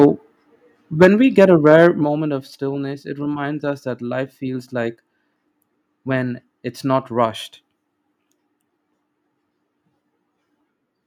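Microphone overload at 0.00 to 0.06 s, 1.01 to 1.08 s and 1.38 to 1.87 s: the peaks are squared off with a harsh crackle, likely from input gain driving the converter past full scale by about 4, 7 and 3 dB. The middle burst flattens roughly a tenth of its waveform, and the last only a small share.

Microphone volume stepped down at 1.05 s, by about 3 dB, and again at 2.04 s, by about 5 dB, just before "of stillness it reminds". Speech and background drop together, likely because the call software cut the input gain after detecting clipping.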